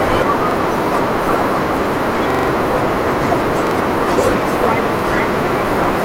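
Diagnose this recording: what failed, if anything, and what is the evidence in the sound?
Driver or buffer stage, repeated buffer: stutters of a repeated 43 ms buffer at 0.51–0.56, 2.30–2.48 (four repeats), 3.67–3.71 and 4.99–5.04 s. Late data forced replays, fitting a 2048-sample buffer.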